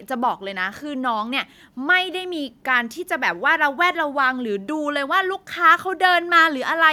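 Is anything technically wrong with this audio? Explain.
No, nothing technically wrong can be heard here.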